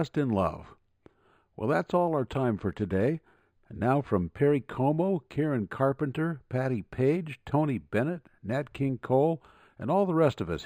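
Throughout the speech, sibilants carry a faint metallic shimmer over a dulled top end. This is imaging from linear upsampling, which fits an 11 kHz source raised to 48 kHz by straight-line interpolation, leaving a mirrored image between 5.5 and 11 kHz, roughly 40 dB down.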